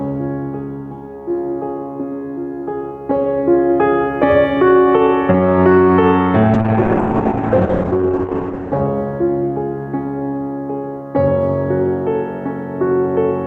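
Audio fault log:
throughout, gain pumping: the music's level swells and ducks by roughly 5 dB, squashing dynamics, likely from excessive input gain driving a fast limiter or compressor on loud passages.
6.54–8.87 s, call bitrate drop: the music turns coarse and watery, with the top end cut from 20 kHz to 8 kHz for about 2.3 s, which fits the encoder falling from around 128 kbps to 8 kbps.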